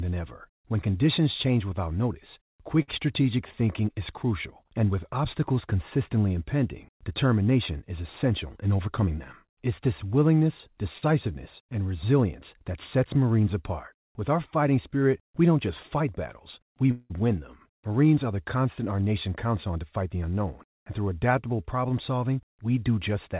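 At 2.82 to 2.90 s a packet arrived late and the jitter buffer ran dry, causing a short stall from a late packet. The receiver held the last sound for 57 ms, so it drags slightly with a faint buzz before resuming with nothing lost.

From 8.44 to 9.08 s, after "consistently impending determination is", the buffer had built up surplus delay and a jitter buffer speed-up trimmed short pitch-period slices, about 70 ms in all. The speech runs at 110% speed with unchanged pitch and sounds briefly rushed.

At 10.98 to 11.04 s, right after "this willingness", another late packet causes a second stall, stretching the preceding sound by 35 ms into a slight held buzz.

At 16.91 to 17.12 s there is a call audio freeze, likely from packets held up in transit emptying the buffer. The last sound is carried on as a fading buzz for 188 ms without dropping to silence, then speech picks up where it stopped.

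From 19.01 to 20.47 s, between "constant our" and "and through adaptable problem", a second speed-up removes about 150 ms, pushing delivery to 111% speed so it sounds hurried at normal pitch. Throughout, the G.711 mu-law call path leaves nothing above 4 kHz.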